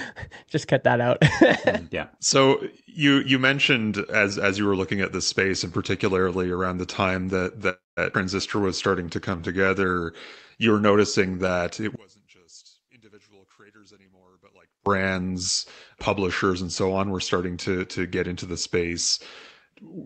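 Right after "around the time that", from 7.69 to 7.99 s, there is a call audio freeze. Packets were likely held up in transit and the jitter buffer emptied. The receiver stretched the last sound into a fading fill for about 276 ms, with roughly 180 ms of it silent. Speech then resumes where it stopped, so nothing is lost, only delayed.

From 8.13 to 8.16 s comes a skip ahead. A stretch of queued audio was dropped, around 150 ms of speech. Playback jumps forward and the two sides are spliced almost seamlessly, with a brief join of about 9 ms.

Between 8.56 and 9.91 s, a jitter buffer slow-down sets in. To build up a reserve, the buffer repeated individual pitch periods and pause fragments to add about 128 ms. Speech plays at roughly 91% speed with unchanged pitch, so sounds drag and can waver slightly.

From 11.96 to 14.86 s, one channel inverted leaves the mono sum collapsing. A likely polarity flip on one stereo side makes the shared centre content cancel. 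The voice drops by about 30 dB to a faint residue of the small difference between channels.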